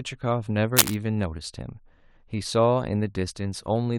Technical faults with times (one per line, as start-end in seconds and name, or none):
0.76-0.94 cable scratch noise